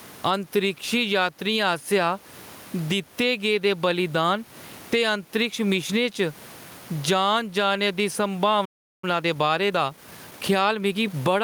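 Gain pumping runs through the whole recording. The input gain was likely set far too high, so a fast limiter clamps down on every loud syllable. The room noise sits about 36 dB below the speech, and the gain swings by roughly 15 dB, leaving the speech squashed.

At 8.65 s a playback stall begins. The player most likely ran short of data or had its thread blocked, and the output falls silent for about 378 ms, until 9.04 s. The speech cuts off abruptly mid-flow before resuming.

From 9.04 s to 11.32 s comes time-compressed catch-up. To clear the backlog built up during the stall, the player removes small slices of audio and cross-fades across the gaps, running about 1.15 times faster. The speech sounds hurried but keeps its normal pitch.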